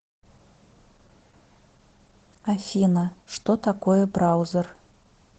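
This speech clip has Opus voice compression throughout. The band stops near 8 kHz, and the voice sounds hoarse and slightly robotic, which fits SILK coding at roughly 12 kbps.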